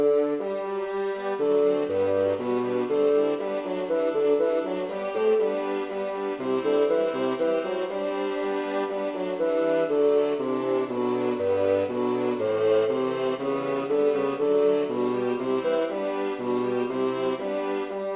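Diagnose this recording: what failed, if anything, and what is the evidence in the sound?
Nothing in the signal points to a failure at any stage: level, continuity and timing hold steady throughout, with no sign of anything having broken between capture and playback.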